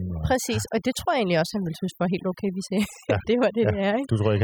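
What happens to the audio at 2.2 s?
At 2.2 s the speech is affected by overdone noise removal, which runs through the whole clip. The noise reducer, set too hard, shuts off frequency bands that sit near its noise estimate. Quiet speech detail goes with them, leaving a near-silent background with twinkling specks. A spectrogram shows sparse, isolated dots between gaps.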